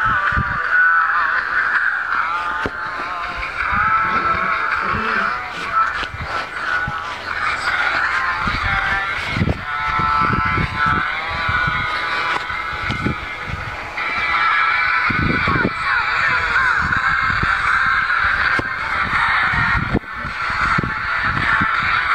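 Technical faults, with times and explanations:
No technical faults detected.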